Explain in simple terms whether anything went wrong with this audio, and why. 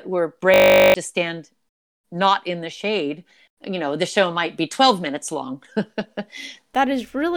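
A steady buzz covers 0.54 to 0.94 s. It's a system hang loop: the computer froze, replaying one 20 ms scrap fifty times a second.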